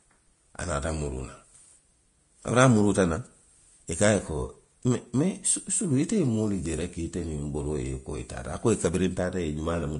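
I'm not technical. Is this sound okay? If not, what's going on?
No. From start to finish the speech sounds hissy and grainy, and the crisp top end is missing above about 10.5 kHz. This is likely Vorbis compression squeezed hard: to save space it discards the highest sounds and replaces fine detail with noise-like grit.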